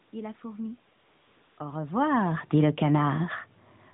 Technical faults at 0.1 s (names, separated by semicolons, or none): none